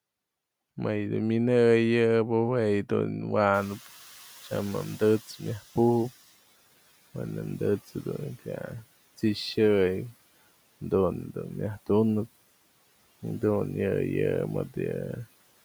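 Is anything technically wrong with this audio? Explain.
Yes. From 3.54 to 6.19 s the noise suppressor is catching up. Room noise jumps by about 21 dB at around 3.5 s, and the suppressor's estimate takes 2.65 s to follow. The noise comes through with less reduction at first, then sinks by about 12 dB. Unlike a gate, the noise fades gradually rather than switching with the speech.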